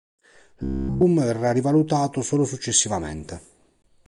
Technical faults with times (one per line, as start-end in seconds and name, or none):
0.63-1.04 robotic sound from repeated short buffers